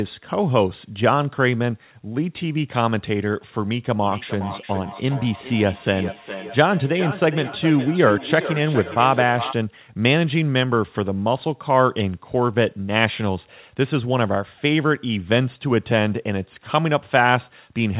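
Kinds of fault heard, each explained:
Feedback echo between two devices: from 4.03 to 9.6 s the speech comes back around after about 0.4 s. That's what happens when a second device in the same room plays the call out loud and the first microphone catches it again, and neither echo canceller can remove the other device's output. The echo peaks at about 10 dB below the speech and sounds thinner and more ringing, cut off at 4 kHz like the rest of this narrowband call.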